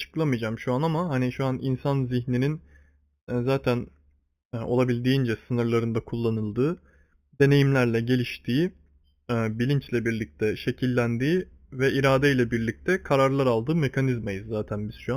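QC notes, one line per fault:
throughout: imaging from linear upsampling. A faint mirrored copy sits around 4 to 8 kHz, roughly 25 dB down, above a dulled top, which fits a straight-line rise from 8 kHz. Unlike aliasing, it mirrors the band rather than folding tones down.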